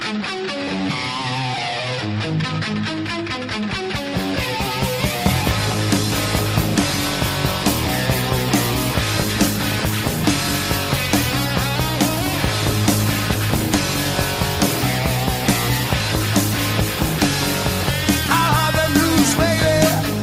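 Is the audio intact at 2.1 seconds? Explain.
Yes, the audio is intact at 2.1 seconds, with no dropout, click, distortion or other fault audible at that moment.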